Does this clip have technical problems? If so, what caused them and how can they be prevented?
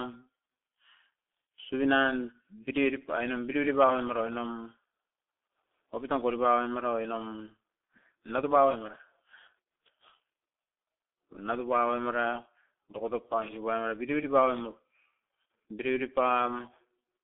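Yes. G.723.1 codec damage runs through the whole clip: nothing above 3.8 kHz survives, the speech band is squeezed to roughly 250 Hz to 3.6 kHz, and consonants smear while the voice turns muffled and hoarse, which fits a very low-rate coder near 6 kbit/s. Using a wideband codec at a higher bitrate would prevent it.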